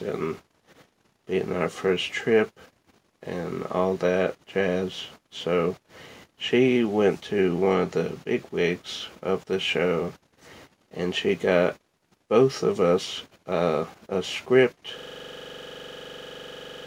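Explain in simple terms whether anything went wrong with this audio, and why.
At 14.99 s a system hang loop starts: one 43 ms slice, likely a stuck 2048-sample buffer, repeats exactly until the end, producing a steady 23.4 Hz buzz rather than silence.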